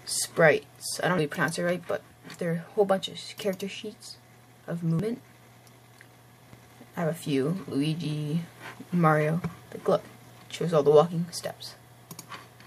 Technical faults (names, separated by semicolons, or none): compressed frames skipped